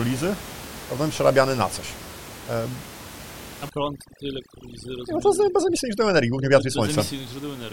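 From 3.69 to 6.85 s, overdone noise removal strips bands near the estimated noise floor, leaving twinkling specks and a patchy, hole-riddled spectrogram over room noise about 16 dB below the speech.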